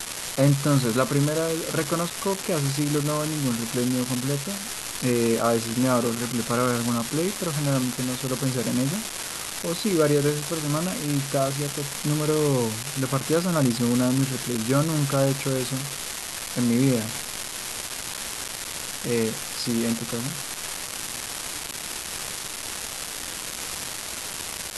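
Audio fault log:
throughout, unreliable data bit: a steady crackle and fizz sits under the speech and carries on unchanged through the pauses, where it is most exposed. One bit line in the sample data is marginal, so a random share of samples come out with that bit flipped. Every error jumps the waveform by the same fixed step, about -12 dBFS, and that scatter of equal-sized spikes is what reaches the ear as constant grit.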